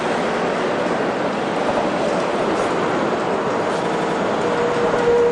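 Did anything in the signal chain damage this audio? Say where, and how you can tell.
Yes, there are repeated buffers at 0.34–0.43 s, 1.71–1.79 s and 3.93–4.18 s, a fault at the driver or buffer stage. Each time, a stretch of about 85 ms plays again right after itself with a hard join, once at the first two points and three extra times at the last, giving a stutter. That length fits a 4096-sample buffer. New audio wasn't ready, so the device replayed its last buffer, and the sound then resumes with nothing skipped.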